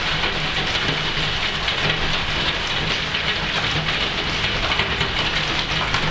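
Nothing is technically wrong with this audio.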